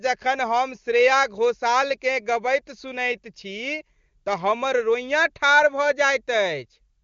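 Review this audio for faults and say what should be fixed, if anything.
Nothing in this speech stood out on listening, so there is nothing here that needs fixing.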